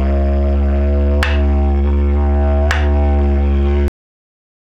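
A cut-off end arrives at 3.88 s, where the audio stops mid-sound and falls straight to digital silence for the remaining 0.72 s. The final stretch of buffered audio was never written out, so there is no natural decay, just an abrupt truncation.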